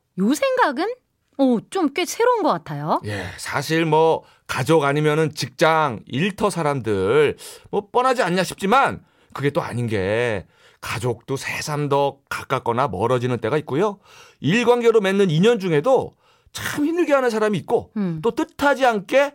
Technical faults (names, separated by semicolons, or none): none